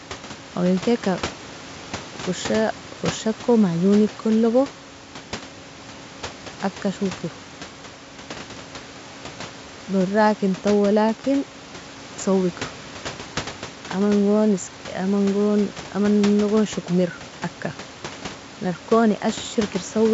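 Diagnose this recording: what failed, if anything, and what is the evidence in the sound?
Nothing in the chain has failed: the speech sits about 19 dB above the room's own background noise, and it has the roughly 7 kHz band limit and faint upper-band hiss of G.722 wideband telephone coding, which fits its full 64 kbit/s mode.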